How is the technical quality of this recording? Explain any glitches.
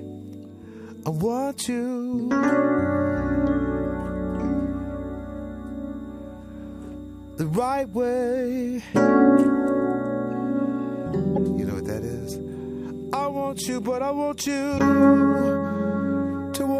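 Two short glitches mar the recording, at 11.33 to 11.38 s and 14.75 to 14.80 s, both from damaged data in a compressed stream. Corrupted bytes made the decoder misread frames and lose sync until the next valid header, producing a brief glitch of roughly 55 ms each time.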